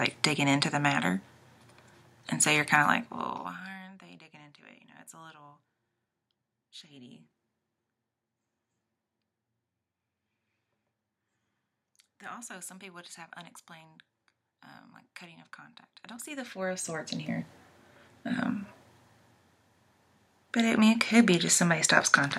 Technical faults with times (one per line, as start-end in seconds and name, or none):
2.80-3.88 zipper noise
15.96-17.28 zipper noise